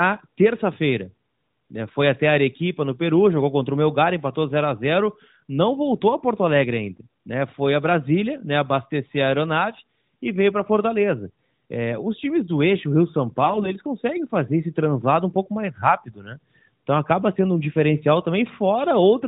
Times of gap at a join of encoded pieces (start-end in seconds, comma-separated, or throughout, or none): none